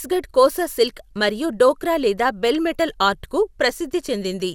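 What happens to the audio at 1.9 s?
At 1.9 s, as throughout the clip, the speech sounds swirly, hollow and smeared, with blurred consonant attacks and nothing above 17.3 kHz. The likely cause is generation loss: around seven lossy re-encodes, fitting MP2 at 128 kbit/s, each requantising on a shifted frame grid so noise piles up.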